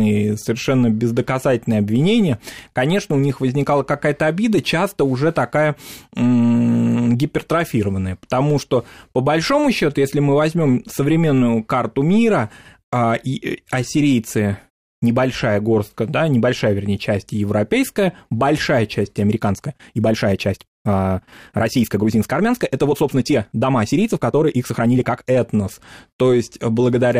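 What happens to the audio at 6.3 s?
Nothing goes wrong at 6.3 s; the speech there plays through intact, with no dropout, click, distortion or other fault.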